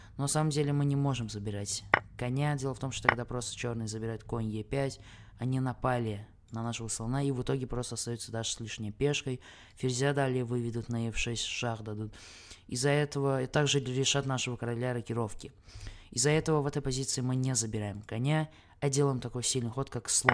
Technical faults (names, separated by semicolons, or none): none